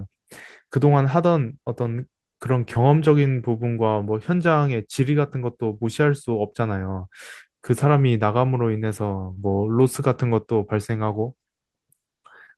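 Short concealed packet loss occurs twice. Around 20 ms of speech arrives too late to decode at 2.73–2.77 s, and again at 9.33–9.39 s, where about 40 ms goes missing. The receiver bridges each gap by extending the preceding sound, producing a brief smear before the real audio resumes.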